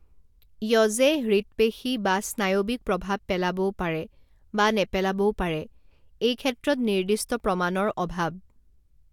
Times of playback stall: none

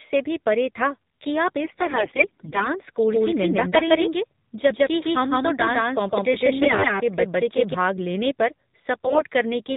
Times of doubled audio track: 3.12-7.74

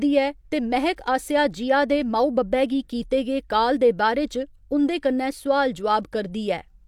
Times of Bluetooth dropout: none

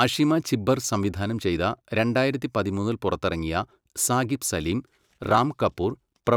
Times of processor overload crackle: 4.92-5.38

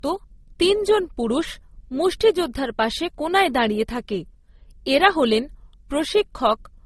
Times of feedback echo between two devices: none

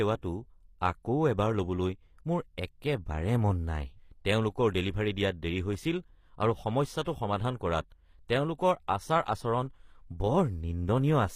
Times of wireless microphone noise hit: none

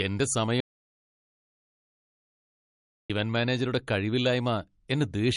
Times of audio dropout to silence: 0.60-3.10

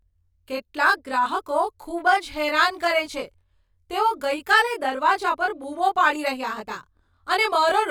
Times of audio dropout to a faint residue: none

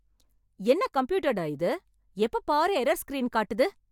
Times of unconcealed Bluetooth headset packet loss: none

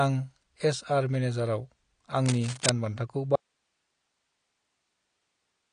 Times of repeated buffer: none

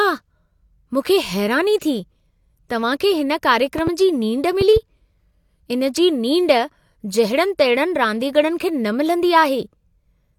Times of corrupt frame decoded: none

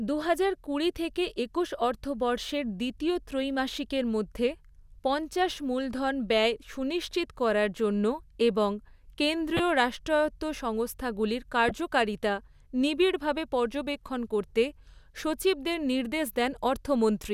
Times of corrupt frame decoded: 9.57-9.60, 11.69-11.71

